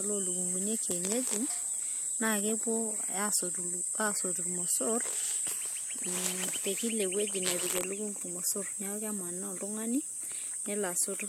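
No technical faults are audible.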